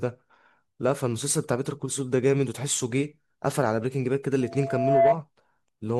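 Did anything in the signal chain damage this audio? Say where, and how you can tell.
Yes. A loudspeaker feedback squeal enters at the acoustic and analogue stage from 4.41 to 5.16 s: a steady 675 Hz tone swells over roughly 0.7 s to about 10 dB above the speech, as the microphone re-captures its own loudspeaker with loop gain above unity at that frequency.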